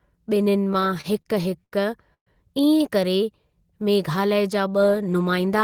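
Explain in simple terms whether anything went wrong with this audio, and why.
Between 0.73 and 1.75 s the speech keeps catching and dragging in a repeated stall, or stutter: nine short hiccups, the longest about 80 ms, where a sound is held on for a moment before things move on. About a fifth of that second is filler, but nothing is lost. The packets carrying the audio kept arriving late, so the receiver's waiting buffer ran dry again and again, and each time it stretched the last sound to cover the gap.

At 2.14 s there is a call audio freeze lasting about 0.16 s. The sound hangs briefly and fades, then goes quiet for roughly a tenth of a second before the speech picks up exactly where it stopped, so nothing is skipped. The likely cause is a batch of packets held up on the way, which emptied the buffer. The pause pushes everything after it about 0.13 s later.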